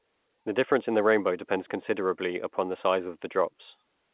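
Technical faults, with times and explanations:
No technical faults detected.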